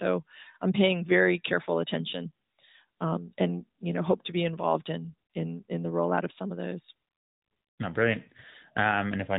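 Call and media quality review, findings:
No faults found: the speech arrives over an AMR narrowband mobile codec path, consistent with AMR-NB at 12.2 kbps, band-limited with nothing above about 3.8 kHz and only light codec colouring.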